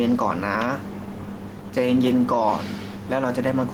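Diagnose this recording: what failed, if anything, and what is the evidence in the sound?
Gain pumping runs right through the speech. The room noise sits about 40 dB under the voice, and the level swings by roughly 5 dB. The squashed, evened-out dynamics point to the input stage. The mic gain was most likely set far too high, so a fast limiter or compressor is clamping down on each loud phrase and releasing in the gaps.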